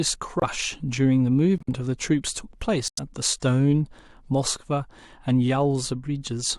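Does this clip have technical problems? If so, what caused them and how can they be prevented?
Yes. Corrupt frame muted: the speech drops abruptly to silence at 0.40 to 0.44 s, 1.58 to 1.69 s and 2.88 to 2.99 s. Bits inside the compressed stream were damaged, the decoder rejected the affected frames, and the player substituted silence for them. The short first gap points to a single lost frame, the longer two to runs of several. Timing around each hole stays intact. Prevention: protect the stream with error correction or checksummed retransmission, and use decoder concealment instead of muting.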